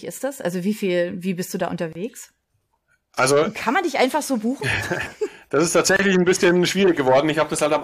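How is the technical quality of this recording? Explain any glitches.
Two short dropouts break the speech, both gaps at joins of encoded pieces. At 1.93 to 1.95 s, after "wie bist du da", about 26 ms of silence opens. At 5.97 to 5.99 s, between "das ist" and "ein bisschen", a 28 ms silence opens. Separately encoded segments were spliced without trimming encoder delay and last-frame padding, leaving abrupt holes with smeared edges before the speech resumes where it stopped.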